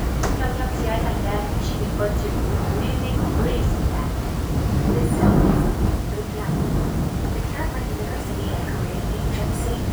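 From start to finish there's a grainy, gritty distortion riding on the sound. It tracks the signal, getting coarser as things get quiet, with the softest moments sputtering or dropping out. That's low bit depth without dither, likely the audio being rounded to very few levels, which fits something like 6 bits. The error sits only about 20 dB under the signal, so you hear it constantly.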